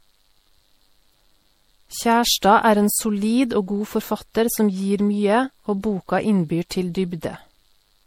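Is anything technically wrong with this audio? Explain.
Yes. Throughout the speech, the audio carries a layered lossy-coding sound, with nothing above about 16.6 kHz. The likely cause is transcoding between lossy codecs: an MP3 stage at roughly 64 kbit/s followed by Vorbis at around 58 kbit/s. The second encoder wastes bits reproducing the first one's artefacts, then adds its own. What separates this from a single low-bitrate encode is that two different artefact textures are heard together, not one consistent kind.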